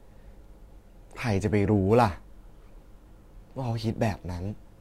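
From 1.9 s to the end, crude rate conversion by dropping samples, likely from 48 kHz to 44.1 kHz, adds an inharmonic fizz about 30 dB below the speech.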